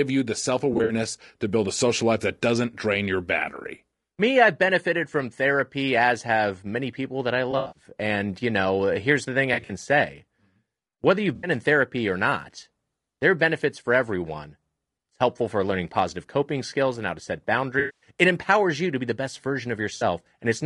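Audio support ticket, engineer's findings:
Rough, grainy speech throughout, noise between harmonics, thin synthetic top band. Likely low-delay AAC compression (AAC-ELD); short frames, starved bits, fits roughly 32 kbps.

AAC frame loss with concealment: smeared, phasey patches at 0.73–0.93, 7.51–7.83, 9.53–9.71, 11.35–11.49, 17.79–18.10, 19.97–20.03 s. Decoder refilling lost spectrum.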